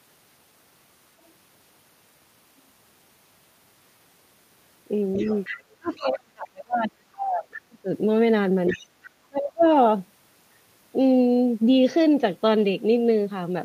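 From 5.13 to 5.95 s a second voice sits about 15 dB under the talker. This is the other side's voice leaking through, likely loudspeaker echo the canceller left in the microphone. It recurs briefly from 8.67 to 8.87 s and faintly, about 30 dB down, at 9.61 to 9.66 s. Unlike the fault below, it adds a voice rather than removing one.

Starting at 5.78 s and running to 7.88 s, the talker's own voice drops by as much as about 40 dB. This is speech suppressed in double talk: the canceller, likely confused by both sides talking at once, turned everything down. Shorter dips follow at 8.72 to 8.84 s (about 25 dB) and 9.27 to 9.65 s (about 35 dB). Each one coincides with the leaked voice, which separates it from an ordinary dropout.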